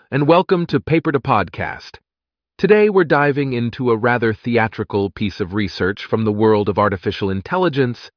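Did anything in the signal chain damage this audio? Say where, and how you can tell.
No, nothing in the signal chain damaged this audio.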